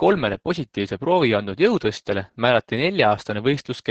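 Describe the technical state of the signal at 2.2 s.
At 2.2 s the speech carries Opus voice compression, present from start to finish. Nothing sounds above about 8.5 kHz, so the coder is running in its wideband mode. The sound points to a low rate near 10 kbps. At that rate the SILK linear-prediction coder keeps only a rough model of the vocal tract and codes the excitation coarsely. The damage is heavy. Speech comes out muffled, hoarse and slightly robotic.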